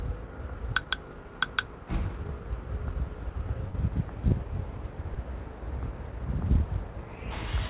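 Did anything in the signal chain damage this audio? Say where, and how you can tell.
Yes, the network stage. From 3.68 to 3.76 s there's a burst of packet loss: the receiver stretches the last sound about 60 ms, fades it, then jumps ahead.

At 5.14 s there's a short concealed packet loss, a quick smear where roughly 12 ms of synthesized fill covers a 20 ms hole before blending back.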